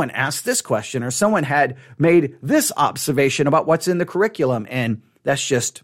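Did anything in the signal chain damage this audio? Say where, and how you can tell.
No, nothing in the signal chain damaged this audio.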